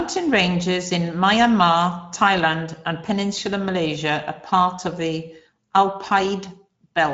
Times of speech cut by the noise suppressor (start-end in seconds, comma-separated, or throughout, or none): none